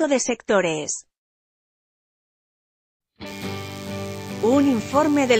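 From 3.26 s to the end, a steady, thin buzz with a rich stack of harmonics sits about 25 dB below the main sound. This is DECT cordless phone buzz: a nearby handset or base sends radio bursts 100 times a second, which the audio circuitry rectifies into an audible 100 Hz tone.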